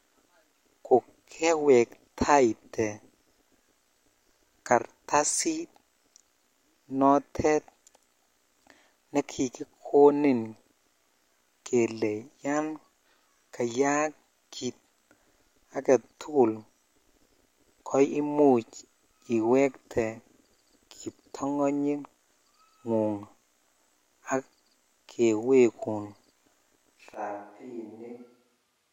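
At 27.14 s the speech abruptly turns roomy and hollow, loses bass, drops roughly 10 dB and gains background noise until the end, which points to a likely switch to a distant microphone. A plain gain drop would keep the close, dry tone.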